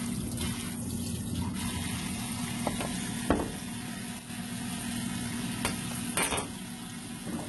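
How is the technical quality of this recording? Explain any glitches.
The technical quality is compromised by codec damage throughout and two brief glitches.

Throughout, heavy HE-AAC compression is likely. Only the lower band is truly coded, with treble rebuilt from copied lower bands, so the top end sounds gritty and metallic and cuts off near 11.8 kHz. The degree of damage fits a very low bitrate, around 16 kbps.

From 4.19 to 4.29 s there is a sudden gain jump: the level, background included, drops by about 6 dB in one step and then returns. This is likely a gain change applied without a ramp, which leaves an abrupt step rather than a smooth fade.

At 5.92 s there is an electrical switching spike, a sharp snap laid over the sound. The likely source is a nearby switch or discharge arcing briefly and being picked up by the audio line as a short burst of clicks.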